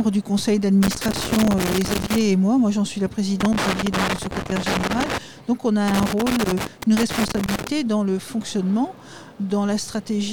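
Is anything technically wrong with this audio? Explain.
Yes. There is loose connector crackle in three bursts, from 0.83 to 2.21 s, 3.40 to 5.18 s, and 5.88 to 7.68 s. A worn or dirty contact is making and breaking as it shifts, chopping the signal on and off, and any DC on the line adds pops. The result is an irregular scratchy crackle over the sound. On a waveform each burst shows jagged dropouts and spikes. On a spectrogram it shows as scattered vertical broadband streaks.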